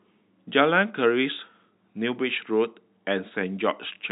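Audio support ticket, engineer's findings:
Nothing to flag on this one: the speech comes across with the usual narrow telephone band of G.711 mu-law coding at 64 kbps, and nothing in it calls for a fix.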